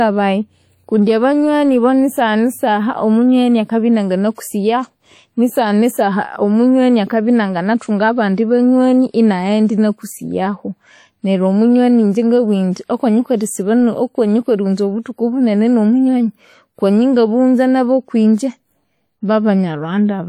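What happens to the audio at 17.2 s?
At 17.2 s the speech carries the same WMA compression damage heard throughout the clip, plainly audible rather than subtle. The likely cause is a transform codec running at a low bitrate, which fits roughly 48 kbps. Long transform blocks spread quantisation noise tens of milliseconds around each sound, and quiet spectral lines are discarded. The result is a ringing, washy texture with hiss that swells and recedes with the signal. On a spectrogram, energy smears in time around onsets and shows patchy gaps where weak components were zeroed, with content reaching about 20.1 kHz. The waveform shows pre-echo ahead of sharp transients.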